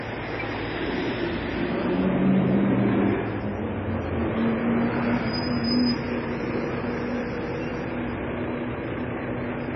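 Throughout the recording, the everyday sounds have nothing above about 5.8 kHz, so they come across dull and boxy, with the swirly, smeared texture of heavy MP3 coding. This is likely low-bitrate audio saved at a high bitrate: the material points to an encode around 23 kbit/s that was later re-saved at roughly 160 kbit/s. The larger second encode cannot bring back the highs or detail the first one discarded.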